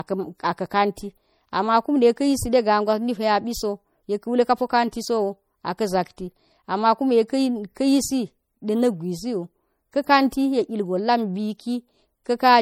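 Speech runs for the whole clip with the swirly, smeared quality of heavy MP3 compression, even though the file is a high-bitrate one. This is likely low-bitrate audio saved at a high bitrate: the sound fits a roughly 48 kbit/s MP3 later re-encoded at 320 kbit/s, which keeps the earlier damage and adds almost nothing. On a spectrogram the smearing shows as blotchy, patchy detail in the upper bands, with nothing above 20 kHz.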